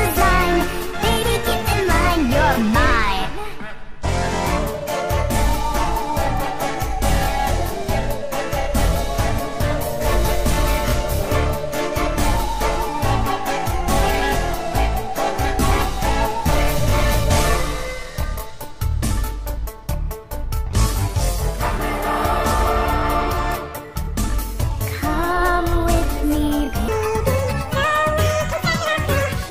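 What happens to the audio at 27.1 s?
A likely clock mismatch in editing or playback runs the audio from 26.88 s to 29.50 s at 1.88 times its recorded speed. This section at the wrong speed sounds hurried and sits roughly ten semitones higher, because speed and pitch rise together.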